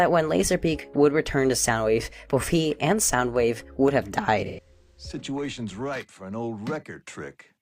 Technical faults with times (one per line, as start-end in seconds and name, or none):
3.88 dropped samples
4.46-4.99 AAC frame loss with concealment
5.45 dropped samples